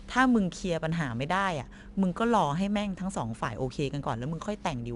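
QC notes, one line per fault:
Throughout: 4-bit ADPCM compression. Each sample is coded as a coarse 4-bit step from a predicted value, so the coding error becomes a broadband grit that rises and falls with the speech, clearly audible as a hiss riding every loud syllable and roughening sharp onsets where the step size lags behind. Nothing reaches above about 10.7 kHz, which leaves the top end dull, and the data rate fits roughly 89 kbps.
0.92 s and 1.86 s: dropped buffer (overrun). At each point the speech jumps abruptly, as though a sliver were cut out and the edges butted together without any gap of silence. About 5 ms of sound goes missing each time, too short to take out a syllable but enough to make a sharp discontinuity. The likely cause is the capture software failing to read its buffer before the hardware overwrote it.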